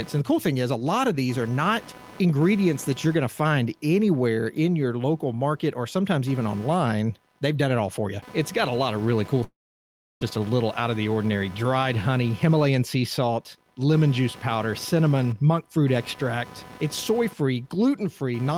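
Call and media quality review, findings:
Computer activity noise, whole clip: buzzing, chirping pulse train around 300 Hz, roughly 20 dB below speech level, tracking machine load rather than speech. Probable component: shared ground between computer and audio path, with CPU, GPU or mouse load currents modulating the audio reference.

Long network dropout, 9.43 to 10.23 s, after "lot of really cool". Last sound extended as a fading buzz, then near-silence for 0.68 s. Resumes at "just a little out", about 0.78 s of audio lost. Likely sustained packet loss; receiver concealment bridges briefly, then mutes.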